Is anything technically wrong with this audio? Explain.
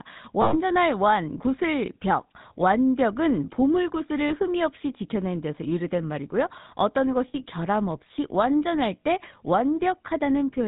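Yes. GSM full-rate codec damage runs through the whole speech clip. The codec models the vocal tract and excites it with sparse, regularly spaced pulses, discarding most of the excitation detail and passing nothing above 4 kHz. The result is a plainly audible buzzy, gravelly roughness, consistent with a 13 kbps coder.

Lost GSM frames occur at 0.42–0.54 s, 4.28–4.33 s and 7.28–7.46 s. In each gap the decoder replays the last good frame's settings instead of the missing data. The speech is held briefly as a rough, metallic ring.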